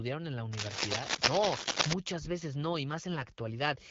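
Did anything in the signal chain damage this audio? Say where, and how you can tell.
Yes. From 0.53 to 1.93 s a dense, uneven scratching and rustling rides over the speech, somewhat louder than the speech itself, then stops. That points to the analogue wiring stage and is likely cable scratch noise: a worn cable, connector or control being moved, so its contact resistance fluctuates rapidly and injects bursts of noise. The AMR-WB wideband coding at 12.65 kbit/s adds only light coding texture and is not the source.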